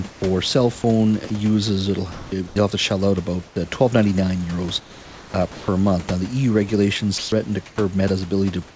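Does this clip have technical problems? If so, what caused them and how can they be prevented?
Yes. From 0.10 to 5.68 s the speech is chopped by the voice detector. About 1.2 s of it gets swapped for comfort noise, so it sounds choppy. The likely cause is a voice detector that cuts in and out too eagerly. Lowering its threshold or adding a longer hangover before it stops sending would prevent it.

At 7.18 to 7.32 s the speech is dropped by the voice detector. It probably took a soft bit of speech for background, so about 100 ms of sound is lost and 140 ms of steady noise plays in its place. A more sensitive detector setting, or longer hangover, would keep that speech.

From 7.18 s to the end, comfort noise stands in for the background. The real room noise, about 24 dB under the speech, is swapped for smoother synthetic noise over roughly 340 ms in total, likely from discontinuous transmission. 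Turning DTX off keeps the real background.

The band stops at 8 kHz, which fits a G.722 call path.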